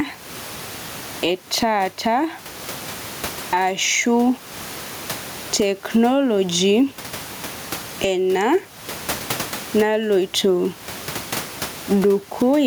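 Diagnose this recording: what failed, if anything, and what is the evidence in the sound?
Gain pumping runs throughout: the gain is pulled down on each loud sound, swinging around 20 dB, with the room noise about 30 dB below the speech. Likely cause: microphone gain far too high, with a fast limiter in call processing clamping every peak.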